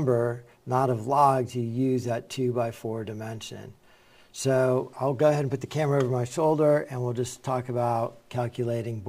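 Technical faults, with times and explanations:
Throughout: sample clock jitter, a timing wobble of a few microseconds in the converter's clock, so steep, loud or high-frequency passages gain a rough hiss roughly 35 dB below the signal. On a spectrogram this shows as broadband noise following the bright, loud moments and vanishing in silences.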